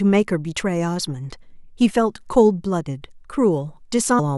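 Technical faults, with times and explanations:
4.18 s, damaged data in the compressed stream: a short blip near the end where corrupted frames threw the decoder off sync until it found the next header.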